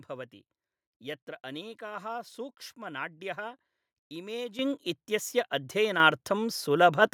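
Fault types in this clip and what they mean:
Microphone volume stepped up: the device's input gain was raised abruptly. Speech and background jump together, about 10 dB at 4.59 s, about 6 dB at 6.0 s.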